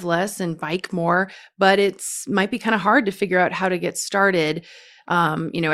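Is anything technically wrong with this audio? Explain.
No, nothing is technically wrong with this audio.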